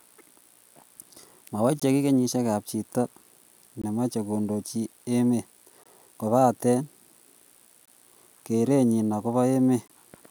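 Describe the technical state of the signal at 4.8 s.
At 4.8 s the signal is intact, with no audible fault at that moment.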